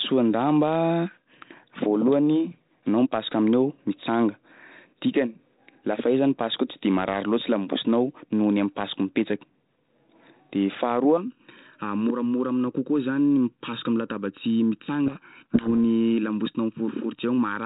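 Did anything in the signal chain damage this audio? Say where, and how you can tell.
Yes, two problems. From 11.17 s to the end there's channel delay (comb filtering). One channel lags the other by under a millisecond, so once they're summed to mono the shared sound cancels at evenly spaced notches, the first near 700 Hz. That leaves the speech hollow and phasey, which points to a buffer misalignment.

Then from 15.06 s to 15.69 s there's a codec payload misread in the G.726 stream, which is running at 32 kbit/s. The two ends disagree on the bit order of the code words, so the decoder pulls apart plausible-looking data and the speech gets buried under harsh, gritty distortion until they're back in step.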